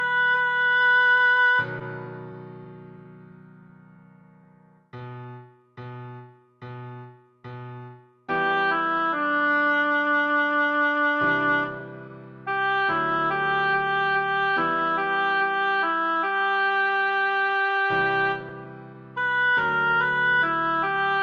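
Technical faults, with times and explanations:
Throughout: clock drift between sender and receiver. The sender's clock runs slow, by about three percent. The receiver's buffer keeps draining. It has to stretch the sound to keep playing. Small timing hiccups recur across the clip, at uneven spacing.
0.32 to 20.94 s: repeated timing corrections. The receiver repeats short pieces to make up for the slow sender. Playback runs at 97 percent speed. Roughly half a second is added in all. Each edit is small.
4.44 to 9.96 s: scattered short gaps. About seven tiny holes appear where packets came late or went missing. Each is patched by continuing the last sound, the longest around ten milliseconds. They come across as brief ticks or smears.
17.54 to 18.52 s: scattered short gaps. A few more small holes, around three, occur here. The receiver fills each by extending the preceding sound, none longer than several milliseconds. 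The result is brief ticks or smears in an otherwise continuous stretch.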